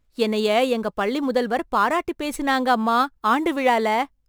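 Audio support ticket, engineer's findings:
Crude rate conversion, throughout the clip. Gritty, inharmonic fizz riding on the louder, brighter parts of the speech, about 30 dB down. The resampler takes nearest samples with no filter, which fits a 48 kHz to 44.1 kHz step.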